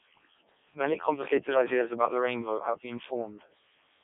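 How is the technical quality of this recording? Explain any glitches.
Quality is poor: the whole recording has passed through a very low-rate vocoder. Codec 2 vocoder, throughout the clip: the decoder rebuilds the speech from sine waves using only pitch, voicing, energy and a coarse spectral envelope, so the original waveform is gone. The damage is heavy, which fits its lowest 0.7 kbit/s mode. The speech sounds robotic and buzzy, confined to roughly 250 Hz to 3.7 kHz, with nothing above 3.8 kHz.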